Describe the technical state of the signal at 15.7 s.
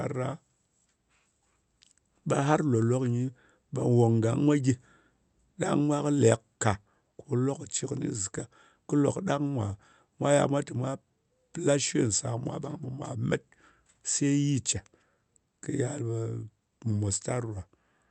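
At 15.7 s the speech is intact, with no fault at that moment.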